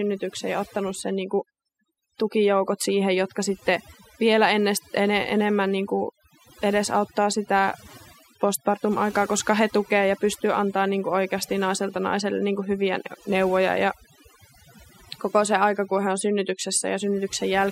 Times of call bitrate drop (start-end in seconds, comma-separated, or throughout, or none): none